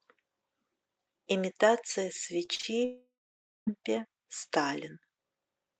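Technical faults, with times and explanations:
2.45–2.49 s, 2.55–2.61 s and 2.61–2.65 s: short concealed packet loss. Three brief smears and wobbles in quick succession, each lasting a few hundredths of a second. Packets arrived too late, so the receiver stretched the preceding sound over each gap before blending back into the real audio.
2.85–3.69 s: long network dropout. The sound turns into a fading buzz or hiss, then about half a second of near silence follows before audio resumes, with that stretch simply missing. Likely a network outage of roughly 0.8 s, during which the receiver could only continue the last sound.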